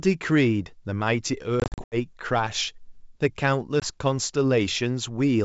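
Speech with hard-edged silent gaps, then slightly distorted speech as it returns, between 1.60 and 1.96 s (about 200 ms lost, gaps up to 80 ms) and briefly near 3.80 s: packet loss on an ADPCM call, where missing packets leave the decoder's predictor out of step.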